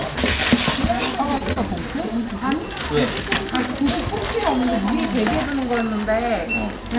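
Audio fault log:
1.38–1.43 s and 1.53–1.71 s, short stall from a late packet: twice in quick succession the sound hangs briefly, as though held in place, rather than breaking into a gap. A packet arrived late, the jitter buffer ran dry, and the receiver stretched the last audio for about 26 ms and then 35 ms until the data arrived. Nothing is lost, so the sound resumes where it stopped, now slightly later. Across the clip, the call path's band limit leaves nothing above 4 kHz.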